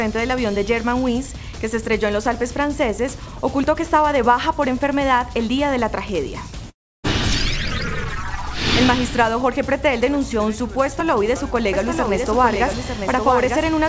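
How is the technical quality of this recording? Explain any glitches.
The recording has four audible glitches of three kinds, heard over a call-codec path whose sound stops at 8 kHz, consistent with G.722 at 64 kbps.

At 3.64 s and again at 11.00 s there is a small jump in the sound, most likely a dropped buffer (overrun). The software failed to read its samples before the hardware overwrote them, so roughly ten milliseconds vanished and the two sides were spliced together. There is no gap of silence, which distinguishes it from a network dropout.

From 6.70 to 7.05 s comes a long network dropout, likely caused by packets failing to arrive for about 340 ms. The receiver concealed the loss by extending the last sound as a buzzy, hiss-like tail that fades, leaving about 300 ms of near silence before the audio resumes further along. The fading fill and the silence set it apart from a buffer overrun, which jumps straight on without any gap.

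From 11.73 s to the end there is a doubled audio track. A second full-band copy of the sound runs about one second behind, roughly 5 dB quieter, most likely from a second capture path or an edit holding two offset copies. It enters abruptly and carries no decay or room colouring, which marks it as a duplicated track rather than an echo or reverberation.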